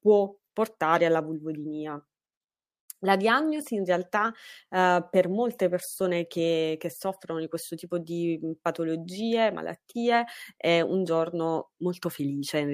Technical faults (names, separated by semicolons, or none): none